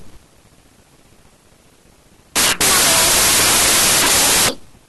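From start to end, the audio shows a wrong sample width. Data written as 16-bit integers are read as packed 24-bit ones. Bytes regroup across sample boundaries, so harsh, loud noise buries the speech. It runs 1.5 times fast, pitched up accordingly.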